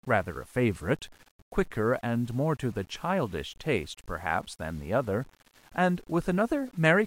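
Throughout the speech, grainy distortion follows the signal, sitting about 30 dB below it; likely low bit depth without dither, consistent with 8-bit rounding.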